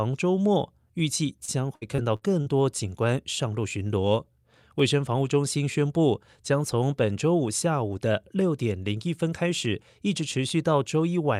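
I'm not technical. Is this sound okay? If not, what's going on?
No, there are two problems.

The first is a steady tick that runs from about 0.99 s right to the end, repeating roughly every 0.95 s while the speech plays. That rhythm points to clock drift buffer slips. Two pieces of equipment likely keep time on slightly different clocks, only a few hundred parts per million apart. The gap slowly builds until a tiny chunk of sound gets skipped or doubled, and each catch-up makes a click.

The second is a burst of repeated packet loss (robotic sound) between 1.45 s and 2.48 s. In that second, the connection dropped bits of audio five times in quick succession, the longest hole about 60 ms. Each gap was papered over by stretching the sound just before it, so about a fifth of that stretch is filler. That's why it turns choppy there, with small pieces missing.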